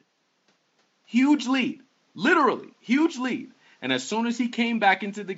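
Nothing goes wrong anywhere in this speech clip, with just a faint bed of room noise sitting about 41 dB below the talking.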